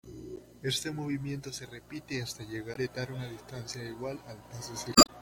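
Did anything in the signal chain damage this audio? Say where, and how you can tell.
Yes: the spans 0.35–0.39 s, 2.73–2.77 s after "movimiento se repite hasta", and 4.93–5.10 s reveal damaged data in a compressed stream, where the decoder misreads frames and loses sync.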